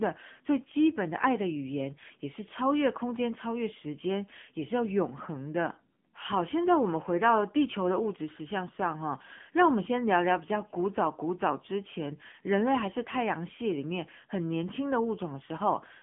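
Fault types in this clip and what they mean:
AMR narrowband mobile codec: throughout, the speech is confined to roughly 150 Hz to 3.4 kHz, with nothing above 3.5 kHz. It is rebuilt from a low-rate vocal-tract model, leaving a plainly audible buzzy, synthetic quality that fits a bitrate near 8 kbps.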